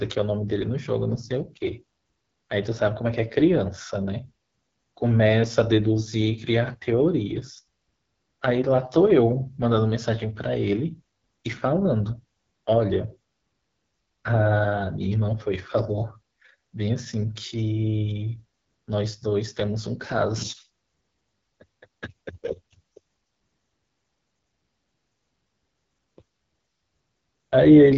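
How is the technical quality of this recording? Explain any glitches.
Technical quality is limited by plainly audible low-rate coding throughout. AMR wideband (HD Voice) codec damage runs across the whole speech recording. Nothing is present above 7.2 kHz, and the codec's modelled, pulse-driven reconstruction leaves the voice rough and raspy, which points to one of the lowest AMR-WB rates, around 8.85 kbit/s.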